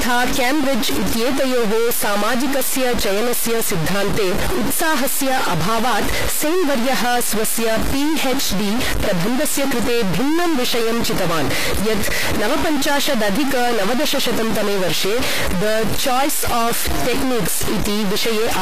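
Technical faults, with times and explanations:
Throughout, stuck bit: the speech carries a distortion that follows the waveform, and the pauses between phrases are filled with a gritty noise floor instead of falling quiet. This is likely one data bit held at a fixed value, so about half the samples are pushed off by that bit's weight. Near silence the error flips with the sign of tiny values, which turns the gaps into audible noise.
Throughout, HE-AAC compression: the treble sounds synthetic. S sounds come out gritty and lispy, and the upper harmonics do not sit in line with the lower ones. This likely comes from HE-AAC coding at a low rate, consistent with roughly 24 kbps. Only the lower band is coded directly, and the top is rebuilt by copying lower bands upward under a coarse envelope. The damage is plainly audible, and nothing reaches above 14.9 kHz.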